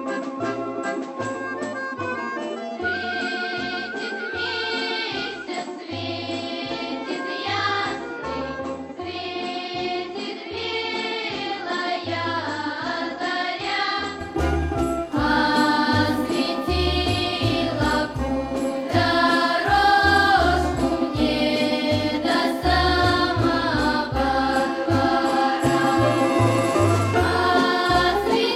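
Input switched to a poorer device, 0 to 14.2 s: nothing above 8 kHz, about 5 dB quieter, faint added noise; likely a lesser microphone, restored at 14.2 s.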